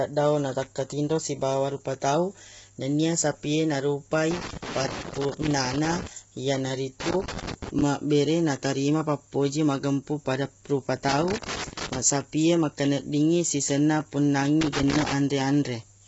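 Throughout, the speech is rough and grainy, likely from heavy low-delay AAC compression at a low bitrate; the spectrogram shows noise between the harmonics and nothing above 7.7 kHz. Loose connector crackle, a contact intermittently breaking the signal, bursts at 4.31–6.07 s after "na rupa", 7.00–7.82 s before "ma bere naterima pappoji", 11.09–11.99 s after "pappoji magempung pada rupa", and 14.61–15.13 s, appearing as jagged waveform dropouts and vertical spectrogram streaks.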